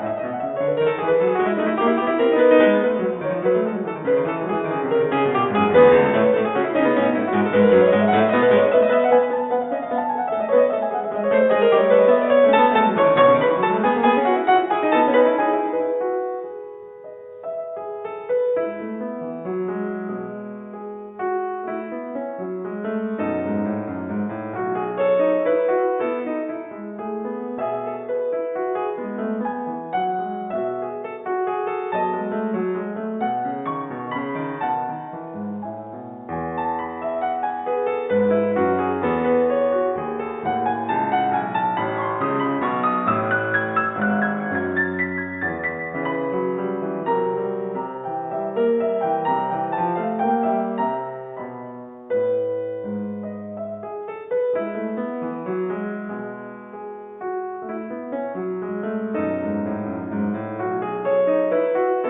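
No technical faults can be heard anywhere in this music recording. Nothing interrupts or disturbs the sound at any point in the clip.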